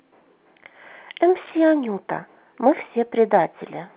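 No technical faults are audible.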